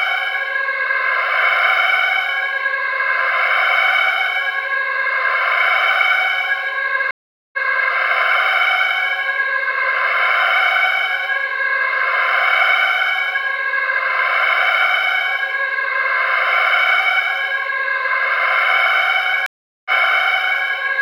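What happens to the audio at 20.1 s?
A stream reconnect covers 19.46 to 20.64 s. The connection drops and the audio goes silent for 390 ms. The player then reconnects with a fresh decoder. Playback resumes about 0.79 s earlier, so a short stretch of sound repeats.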